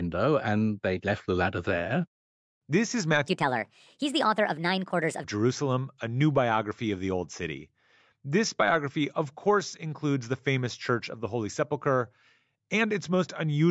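Speech, with a wrong sample rate from 3.28 to 5.24 s: it runs 1.38 times fast and about 5.5 semitones high, which fits 16 kHz audio played at 22 kHz; spectrogram harmonics jump upward and compress in time.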